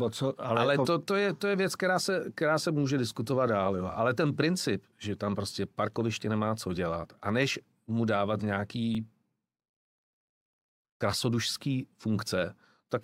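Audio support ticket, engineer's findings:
Brief stutter/click in speech, 8.95–8.97 s: about 23 ms of audio plays twice at a chunk join. Overlapping chunks in the chunked processing or streaming stage, 5.0 s chunks each starting before the previous one ends, duplicating the overlap.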